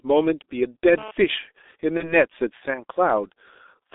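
From start to end, the speech carries heavy G.723.1 codec damage. The line passes only about 300 Hz to 3.7 kHz. The coarse, slowly updated voice model points to a bitrate near 6.3 kbit/s. Speech sounds muffled and hoarse, and consonants smear together.

From 1.97 to 2.14 s there is VoIP packet loss concealed by the speech codec. The gap fits one lost 30 ms frame. The decoder repeated its last pitch and filter, then recovered slowly. A brief stretched, fading sound replaces the speech, and it stays weak or distorted afterward.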